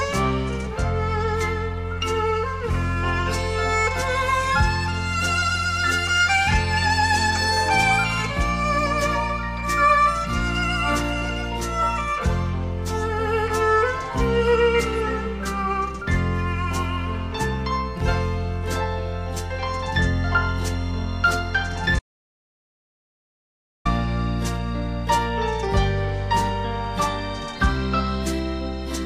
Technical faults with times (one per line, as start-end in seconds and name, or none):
21.99-23.85 audio dropout to silence